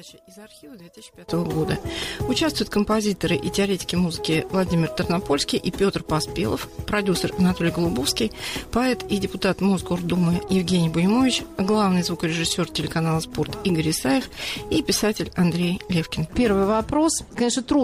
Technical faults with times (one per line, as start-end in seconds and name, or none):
0.00-1.29 one channel inverted